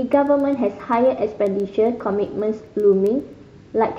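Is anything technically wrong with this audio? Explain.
Yes, there are word clock ticks from 0.13 s right through to the end of this speech clip. You get around thirty sharp ticks of uneven strength at a steady pace, one roughly every 0.15 s. The digital link is being read by a device running on its own clock, about 150 ppm off from the sender's. Each time the two clocks slip a full sample apart, a single sample is dropped or repeated, and that glitch is the tick you hear.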